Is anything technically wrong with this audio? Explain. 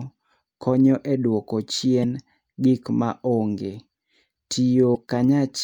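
Yes. Damaged data in a compressed stream at 2.00–2.05 s and 4.93–4.97 s: corrupted bytes make the decoder misread frames and resync, producing brief glitches.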